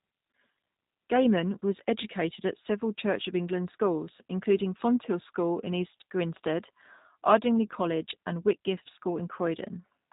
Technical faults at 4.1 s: G.729 codec

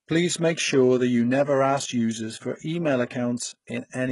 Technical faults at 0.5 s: HE-AAC compression; pre-echo

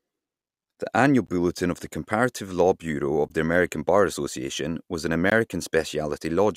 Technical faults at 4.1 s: none

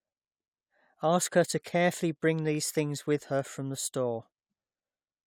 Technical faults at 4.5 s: none

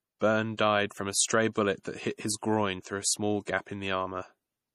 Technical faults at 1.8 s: low-bitrate audio saved at a high bitrate

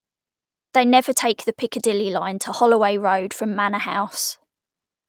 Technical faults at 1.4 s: none

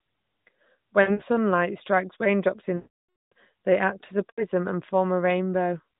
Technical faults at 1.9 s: none

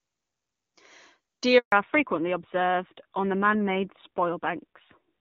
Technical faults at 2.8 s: fallback to narrowband

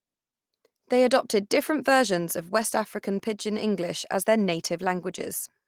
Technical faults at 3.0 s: lost packet rebuilt from error correction

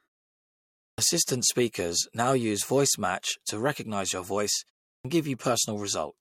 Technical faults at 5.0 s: clipped start after a pause

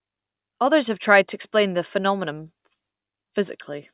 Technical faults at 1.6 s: none

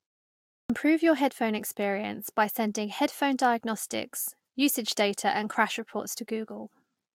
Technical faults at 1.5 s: none

